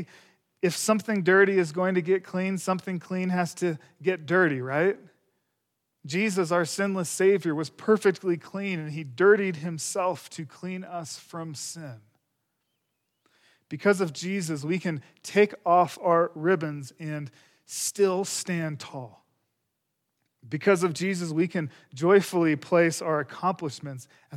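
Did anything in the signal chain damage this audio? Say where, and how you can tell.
No, nothing in the chain.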